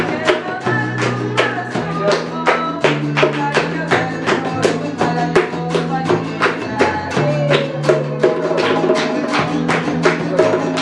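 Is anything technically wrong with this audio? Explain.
No, nothing stood out as technically wrong when listening to this audio.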